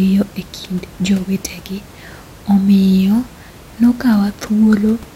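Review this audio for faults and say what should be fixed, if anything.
No faults turn up in this speech recording, so nothing needs fixing. A low room noise sits about 24 dB below the speech, belonging to the space the microphone was in.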